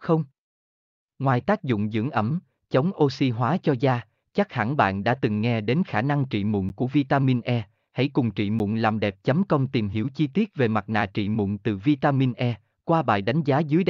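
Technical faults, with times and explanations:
6.69 s and 8.59 s: block of digital silence, 10 ms of silence each time, likely an output buffer left unfilled, giving an abrupt drop heard as a tick or dip.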